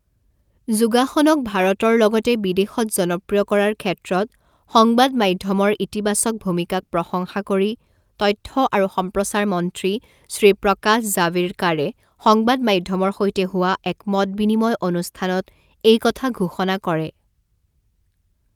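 No technical faults turn up anywhere in the recording; the speech signal stays intact and continuous throughout.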